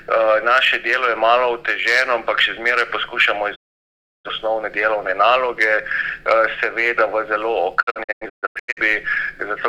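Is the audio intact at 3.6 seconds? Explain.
No. A digital broadcast dropout runs from 3.54 to 4.30 s: the receiver stopped decoding good frames and muted, so the sound fades out over 20 ms into silence. About 0.68 s of programme is lost, consistent with a run of failed frames. When sound returns, it picks up later in the programme rather than resuming where it stopped, which distinguishes it from a simple pause or stall.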